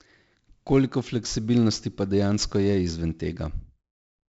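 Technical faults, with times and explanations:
Throughout, 4-bit ADPCM compression: heavy gritty hiss tracks the louder speech from coarse 4-bit prediction steps, and nothing sounds above 7.7 kHz from a low sample rate, which fits about 64 kbps.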